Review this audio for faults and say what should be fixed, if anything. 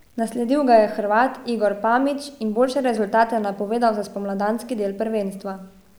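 Grainy, signal-following distortion runs through the whole speech clip, sitting around 40 dB below the signal, with quiet syllables and decays turning gritty or sputtering. This is low bit depth without dither, likely truncation to 9 bits. Keep at least 16 bits and apply dither before any word-length reduction.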